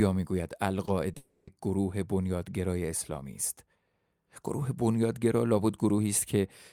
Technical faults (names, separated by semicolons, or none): short concealed packet loss; long network dropout